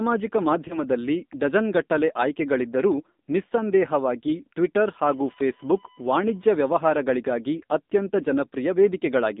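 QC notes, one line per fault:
Throughout: AMR narrowband mobile codec. The speech sounds clearly buzzy and synthetic, and the band is held between about 200 Hz and 3.7 kHz with nothing in the upper range. The audio passed through the 8 kHz mobile speech codec, which rebuilds each 20 ms frame from a vocal-tract model excited by a few pulses. The damage is plainly audible, which fits a low mode of around 7.4 kbps.
0.68 to 0.83 s: lost AMR speech frame. The sound gives a brief dip or warble, then returns slightly rough before settling. One 20 ms frame failed its check after a transmission error. The decoder filled the gap by repeating the last good pitch and vocal-tract settings at reduced gain. With only a single frame missing, the result is a short blemish and not a drawn-out fade to silence.
4.78 to 6.78 s: USB whine. A steady, fixed-pitch tone at 1 kHz sits under the speech for two seconds, roughly 35 dB below it. 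The USB bus draws current in 1 ms frames, and that periodic load leaked into the audio through the power or ground path. The result is a whine at exactly the bus frame rate.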